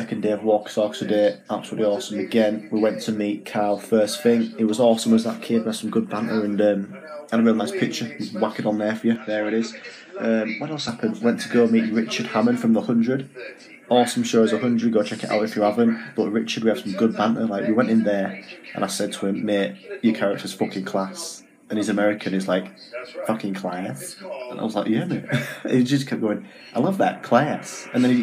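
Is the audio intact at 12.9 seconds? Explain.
Yes, the audio at 12.9 seconds is intact, with no dropout, click, distortion or other fault at that moment.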